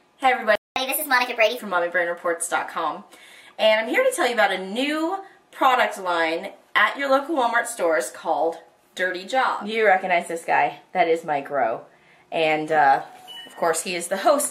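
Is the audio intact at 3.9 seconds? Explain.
Yes, the audio is intact at 3.9 seconds, with no dropout, click, distortion or other fault at that moment.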